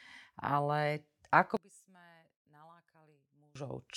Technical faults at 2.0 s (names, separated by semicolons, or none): one channel inverted